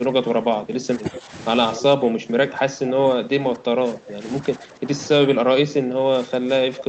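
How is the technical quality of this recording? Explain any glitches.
The recording is marred by repeated level dips and two short echo bursts, heard over a call path whose Opus coding cuts the top end at 8 kHz.

Speech suppressed in double talk: from 0 to 1.33 s, 1.76 to 4.25 s, 4.41 to 4.91 s and 5.23 s to the end, the voice sinks by about 15 dB, about 10 dB in the 4.41 s stretch, and sounds dulled or clipped into fragments. The likely cause is an echo canceller mistaking overlapping talk for echo and ducking both sides. On a waveform the envelope shows sudden notches, and a spectrogram shows the upper bands fading.

Echo leak: at 1.14 to 1.21 s and 1.73 to 1.82 s, brief faint repeats of the voice appear about 0.25 s behind the original, roughly 15 dB quieter. Residual loudspeaker sound likely escaped the canceller and returned. A spectrogram shows time-shifted ghosts of the preceding harmonics.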